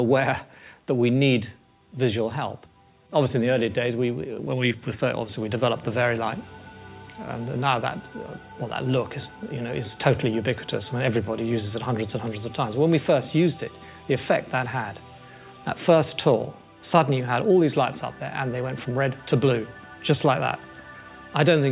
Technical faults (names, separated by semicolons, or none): none